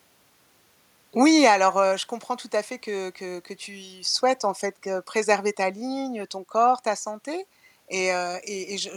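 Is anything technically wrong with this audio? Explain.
No, nothing in this speech recording stands out as a technical fault. There is no problem to point to at any moment in it.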